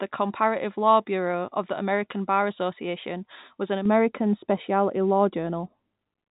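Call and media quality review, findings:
De-emphasis applied wrongly: speech turns dull and muffled from 3.86 s, right after "was an", to end of clip. Probable component is a de-emphasis filter run on audio lacking pre-emphasis, or run twice. Smooth treble slope, about 11 dB down at 10 kHz relative to 1 kHz. The G.711 mu-law telephone path stays band-limited below 4 kHz, with coding damage faint or absent.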